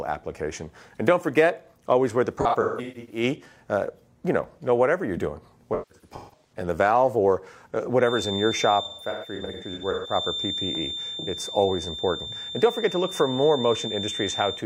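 Smeared, noisy patches break up the sound from 2.41 to 3.23 s, 5.73 to 6.52 s and 8.84 to 10.15 s. This is AAC frame loss with concealment: the decoder filled the gaps from the last good spectrum, with gaps of about 150 ms at most.

From 7.97 s to the end, a thin whistle at one pitch, slowly swelling and fading, sits near 3.6 kHz, about 10 dB under the sound. This is likely a feedback whistle, with the speaker-to-microphone loop hovering at the point of feedback.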